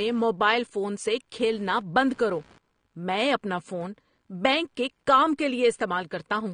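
Throughout the speech, computer activity noise adds a faint buzzing chirp, pulsing around 70 times a second and well below the voice, tracking the computer's activity rather than the talker, unlike steady mains hum. The whole clip is also dull, with nothing above 9.6 kHz and audible warbling on sibilants, likely from AAC compression at a rate that fits 32 kbps, not simple low-pass filtering.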